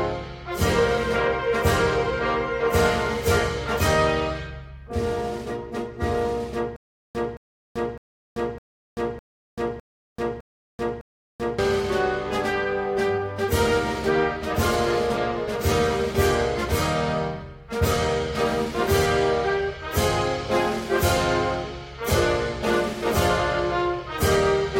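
From 6.76 to 11.59 s the audio breaks into a stutter with silent gaps: the same 220 ms fragment repeats eight times at an even 607 ms pace, separated by about 387 ms of digital silence, with the intervening audio lost, likely from a stalled player or stream replaying its last buffer on each retry.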